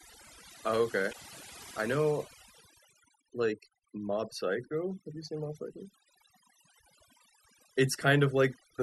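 Throughout, the background sits at near silence flecked with twinkling specks. This is overdone noise removal: the reduction was set so hard that frequency bands close to its noise estimate were pushed down or shut off, taking quiet parts of the speech with them.

From 1.09 to 1.15 s a brief glitch breaks through. That points to damaged data in a compressed stream: corrupt bytes at that point caused the decoder to misread frames and lose sync before locking onto the next valid frame header.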